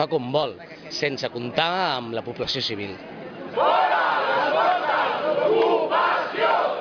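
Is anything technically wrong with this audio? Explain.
No, nothing technically wrong can be heard in this audio; the signal holds steady throughout with no audible disturbance to its level, timing or frequency content.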